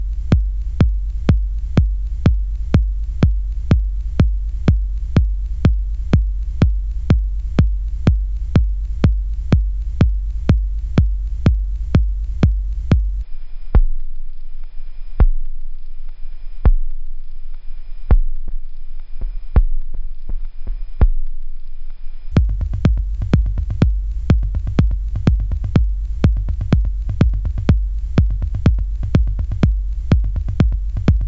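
From 13.23 s to 22.32 s, the audio has a wrong sample rate fault. The samples are read out far slower than they were captured, and nothing resamples them. Everything runs at one third speed. Pitch drops by 19 semitones, just over an octave and a half. The sound turns deep, sluggish and drawn out. The ratio fits material recorded at 48 kHz being played back at 16 kHz.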